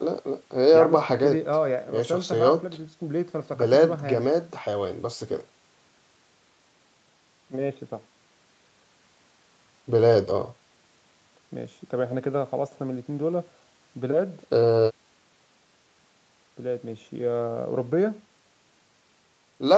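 No faults heard on this speech recording; the call processing and codec leave nothing above 8 kHz, as expected for a call path of this kind.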